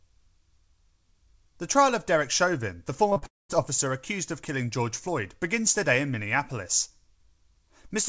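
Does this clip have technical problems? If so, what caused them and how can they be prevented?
Yes. Short concealed packet loss occurs at 3.10 s, 3.13 s and 3.18 s, in bursts of roughly 20 to 40 ms each. The receiver patched each gap by extending the preceding sound, which leaves a quick smear or wobble just before "officer accused of killing". A larger jitter buffer or forward error correction would help prevent this.

Long network dropout runs from 3.26 to 3.51 s. The sound carries on briefly as a fading continuation, then drops to about 0.2 s of silence before resuming at "officer accused of killing", with the intervening audio gone. The likely cause is a quarter-second network outage. A more stable connection, such as wired rather than congested Wi-Fi, would prevent it.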